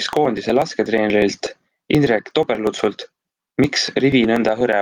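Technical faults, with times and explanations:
throughout: gain pumping. The gain swings by about 15 dB, squashing loud and soft parts closer in level, likely from excessive input gain driving a fast limiter.
0.13 to 4.73 s: periodic USB or driver dropouts. Roughly 4 ms of audio is skipped every 0.12 s, producing regular ticks heard only while signal is present.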